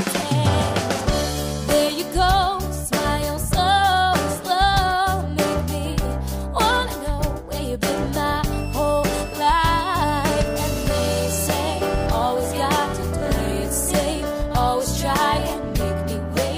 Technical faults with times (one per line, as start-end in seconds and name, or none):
8.53-12.06 switching supply whistle